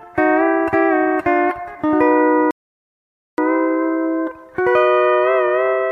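At 2.51 s there's a rebuffering stall: the player ran dry of downloaded audio and simply waited for more to arrive. You hear the sound drop to silence, and then at 3.38 s it picks up again right where it left off. Nothing goes missing, it's just that about 0.87 s of dead air gets inserted into the timeline, so everything after that point lands later than it should.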